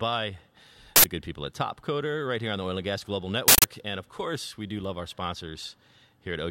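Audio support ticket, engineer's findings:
Uninitialised buffer, speech, two hits: loud digital-noise bursts at 0.96–1.04 s (80 ms, before "the good people at") and 3.48–3.64 s (160 ms, before "and of course we"). Playback buffer read before audio was written; stale memory played out as samples.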